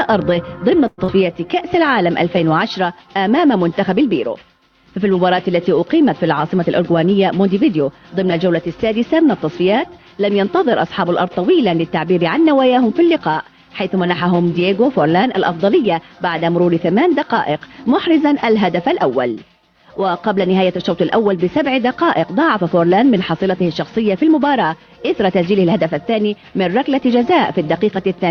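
From 0.87 to 1.10 s the sound breaks off. For about 206 ms it is carried on as a fading buzz, then 30 ms of silence follows. It resumes with roughly 100 ms gone. This is likely a long network dropout, with the delay shifting by about 50 ms.

Right after, from 1.16 to 1.56 s, comes a jitter buffer slow-down. The receiver repeats tiny pitch periods to rebuild its reserve. That adds 58 ms, so playback runs at 87% speed. The sound drags and stretches, but its pitch stays the same.

From 6.44 to 7.80 s a jitter buffer speed-up occurs. The buffer holds too much audio, so short pitch-period pieces are cut, about a tenth of a second in total. Playback runs at 107% speed. The sound feels hurried, at unchanged pitch.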